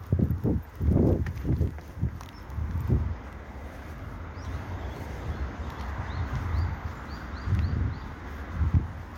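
From 1.71 to 8.22 s, about five clicks recur every 1.63 s as thin vertical spectrogram lines, likely clock drift buffer slips dropping or repeating small sample blocks.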